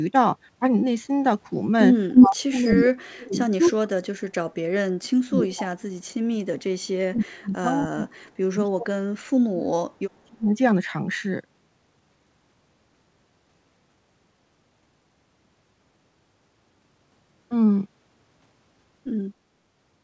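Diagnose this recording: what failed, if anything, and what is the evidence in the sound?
At the call-processing stage, the echo canceller on the far end's loudspeaker side likely let some of its microphone pickup through as an echo leak. Short delayed copies of the speech come back at 2.13–2.27 s, 2.7–2.82 s and 3.65–3.71 s, each trailing the original by 273 ms. The first is roughly 10 dB louder than the speech, the second about level with it, and the third around 20 dB below.

The same canceller's double-talk handling likely broke down, leaving speech suppressed in double talk. It could not tell the local talker from the loudspeaker echo, so it attenuated both. The speech drops out in stretches at 2.19–4.37 s, 4.6–6.9 s, 7.09–8.3 s and 8.54–10.49 s, sinking by up to about 40 dB, and about 35 dB in the third stretch. The audio crosses the G.722 path at 64 kbps, which carries nothing above 8 kHz.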